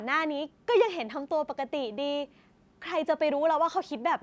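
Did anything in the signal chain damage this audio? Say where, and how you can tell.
No, nothing in the signal chain has damaged this speech. It has passed through a call's microphone processing, which trims the lowest bass and leaves nothing above 8 kHz, as that stage normally does.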